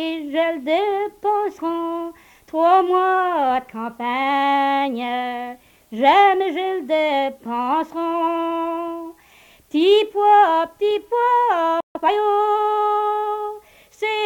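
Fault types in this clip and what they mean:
Playback stall: At 11.80 s the sound cuts out mid-flow and stays silent for about 145 ms, until 11.95 s. This likely happened because the player ran out of buffered data or its thread was blocked. The sound then resumes.
Time-compressed catch-up: Right after the gap, from 11.95 to 12.09 s, the player trims its backlog by cutting out small pieces and cross-fading them together. The audio runs at twice normal speed but keeps its pitch.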